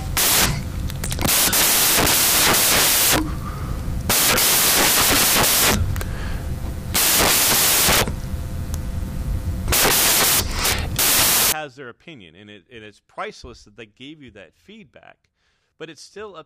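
From the start to 11.52 s, the speech is buried under loud, harsh broadband noise. This is a case of samples built from the wrong bytes. The reader assembles each sample incorrectly, whether off by one byte, with the byte order swapped, or with the wrong alignment. The rapidly changing low bits end up as the large part of each value. Clean audio returns just before "their opinion and it".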